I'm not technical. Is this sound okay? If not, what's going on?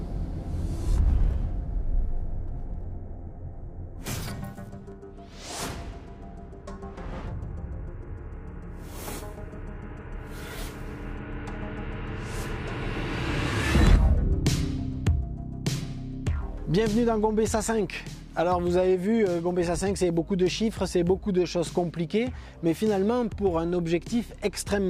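Yes, nothing wrong can be heard here.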